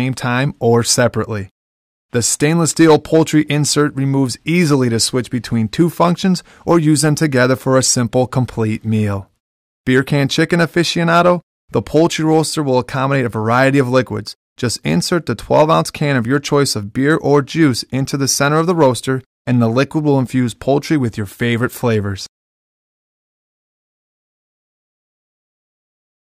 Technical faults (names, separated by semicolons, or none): hard clipping